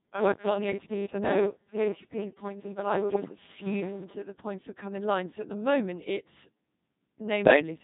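The speech runs through a Codec 2 vocoder for its whole length, at a heavily reduced rate whose sound fits roughly 2.4 kbit/s. Only pitch, voicing, energy and a coarse spectral envelope survive transmission, and the decoder rebuilds the voice from sine waves, so the original waveform is gone. The result is a robotic, buzzy voice with a synthetic quality throughout.

From 3.14 to 3.36 s, bit errors on the digital voice radio corrupt the vocoder's parameter stream at a rate of around 5 percent. Because each bit in such a sparse stream steers a whole frame's pitch, level, voicing or spectrum, the damage spreads across a run that fits about seven frames. The voice lurches in pitch and loudness and dissolves into warbling, bleeping gibberish. The same fault returns from 7.46 to 7.62 s, a shorter burst of about five frames with the same garbled, warbling breakup.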